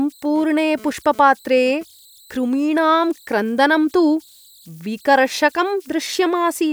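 Converter idle tones run through the whole speech clip. An undithered delta-sigma converter settles into repeating bit patterns, leaving a faint whistle around 4 kHz, about 34 dB down. From 0.36 s to 1.83 s comes GSM phone buzz, just before "कृमीणां क्रन्दनं तु". A nearby phone sending data pulses at about 217 Hz. The circuit rectifies them into a raspy buzz, about 23 dB below the speech, that comes and goes.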